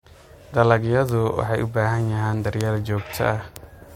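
Bit error spikes at 1.09 s, 2.61 s (just after "u baahan yihiin") and 3.56 s: single flipped bits jolt one to three samples to about -6 dBFS, each a sharp broadband tick.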